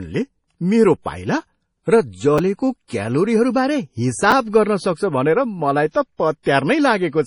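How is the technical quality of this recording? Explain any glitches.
The recording is heavily degraded by low-bitrate lossy coding, with two brief ordering glitches and one smeared attack.

MP3 compression runs through the whole clip. Nothing is present above 10.5 kHz, so the speech sounds dull and band-limited. The damage is heavy, which fits an encoder starved at around 32 kbps. Short of bits, it drops the top band outright and discards weak spectral lines that flicker in and out between frames. The result is a watery, swirling texture, chirpy sibilants and softened consonant onsets. This is likely MP3 at that rate.

Chunks out of order occur at 2.38 s and 4.31 s. Each involves a segment of about 5.8 ms played out of place: one chunk late at 2.38 s and two chunks late at 4.31 s. No audio is missing, but the displaced segment creates abrupt joins where the waveform doesn't line up. Each event is heard as a tiny jumbled stutter.

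Pre-echo appears from 5.90 to 5.95 s, spreading about 48 ms ahead of a sharp attack. The codec distributes quantisation noise across its whole transform block. When a transient lands late in that block, noise sized for the loud part also fills the quiet stretch before it. A short hiss arrives just before the onset, and the attack itself sounds blunted and smeared rather than crisp.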